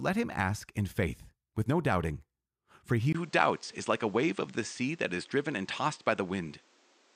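After a 20 ms gap at 3.13 s, nothing above 8.9 kHz and a new noise floor: likely an input switched to a poorer device, not filtering.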